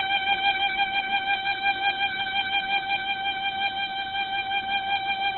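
From start to finish the music sounds dull, rough and grainy, with nothing above about 4.5 kHz and tones smeared into a noisy texture, though without the hollow swirling of MP3. This is likely Opus compression at a very low rate: with too few bits, the encoder filled bands with copied or noise-like content and narrowed the bandwidth heavily. The result fits its music mode running at around 12 kbps.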